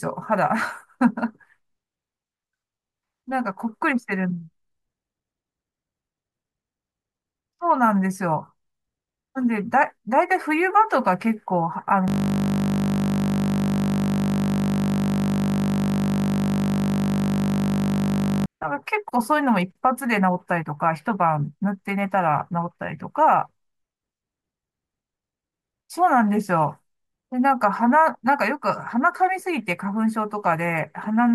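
A steady 50 Hz buzz replaces the speech from 12.08 to 18.46 s, as a single 20 ms fragment repeats over three hundred times. This is a system hang loop: the system froze while the audio hardware kept replaying one ring buffer of about 20 ms.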